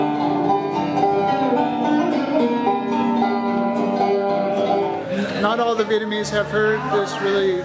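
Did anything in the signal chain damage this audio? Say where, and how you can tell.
No, nothing in the audio stood out as damage from any stage of the chain when I listened.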